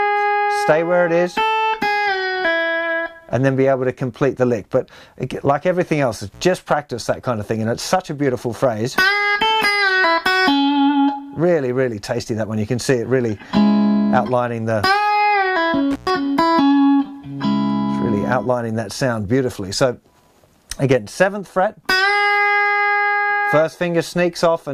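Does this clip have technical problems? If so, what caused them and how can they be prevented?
Yes. Intermittent contact cuts the sound at 6.32–6.42 s and 15.91–16.10 s. A loose cable or plug briefly opens for about 77 ms and 114 ms, with crackle at each edge. Secure or replace worn connectors and cables before recording.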